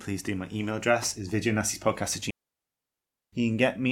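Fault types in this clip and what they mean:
Digital wireless dropout: the radio link lost too much data, so the receiver simply muted with a very quick fade. You get a clean, near-silent hole from 2.30 to 3.33 s, just over a second long, with no noise burst either side.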